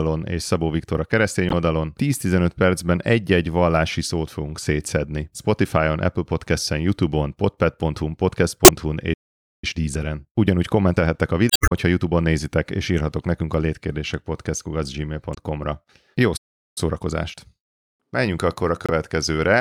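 At 1.49 s, just after "a keresztény", damaged data in the compressed stream produces a short glitch as the decoder misreads bad frames, loses sync and skips ahead to the next frame header. The same blip recurs at 8.65, 11.48 (longer, about 0.23 s), 15.31 and 18.86 s.

At 9.13 s the speech cuts out for about 0.49 s in a playback stall, likely from the player running out of buffered data. It resumes at 9.64 s with time-compressed catch-up, running about 1.1 times faster at unchanged pitch until 12.45 s, just before "és írhatok nekünk a".

A second stall silences the audio from 16.36 s for about 0.39 s. Catch-up at 1.1 times speed follows from 16.78 s to the end.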